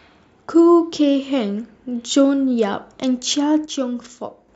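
From 3.65 s to 4.49 s the speech abruptly drops by about 6 dB, sounding quieter but otherwise unchanged for just under a second before full level snaps back near the end. The likely cause is one channel dropping out: with one side of the stereo pair gone, the mono sum keeps only half of the material both channels shared, hence the sudden 6 dB step, and anything carried only by the lost side vanishes entirely.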